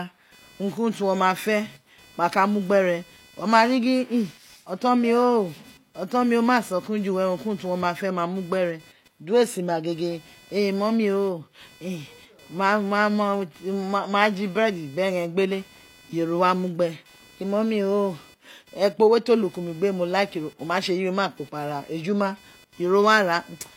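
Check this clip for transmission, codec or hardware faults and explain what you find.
There's computer activity noise under the speech for the whole clip: a buzzy, chirping whine pulsing at around 500 Hz, roughly 30 dB below the voice. It's the machine's processor or graphics load shifting the shared ground, so it tracks computer activity, not the speech.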